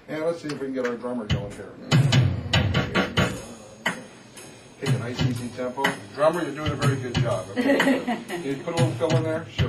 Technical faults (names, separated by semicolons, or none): none